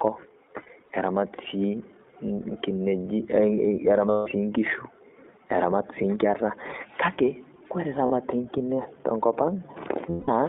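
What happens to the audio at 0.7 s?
At 0.7 s the audio falls inside a stretch of lost iLBC frames running from about 0.62 to 0.91 s. Roughly 120 ms of audio is missing, scattered over about 280 ms in short gaps, which points to around six 20 ms frames dropped, none in a run much longer than a couple of frames. For each gap the decoder repeats the last pitch cycle blended with noise, so the speech briefly turns into a held, faintly buzzy, breathy vowel before snapping back. On a spectrogram, the harmonics freeze flat and blur with noise across those slivers. In the waveform, repeated noisy cycles replace the natural variation.

The whole clip, including this moment, passes through the iLBC codec at 15.2 kbps. Its line band runs from 250 Hz to 3.7 kHz, so the speech has a thin, telephone quality with plainly audible rough, synthetic coloring. Each 20 ms frame is coded on its own, which is why the voice recovers immediately after each loss. 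A spectrogram shows nothing above about 4 kHz and little below 250 Hz.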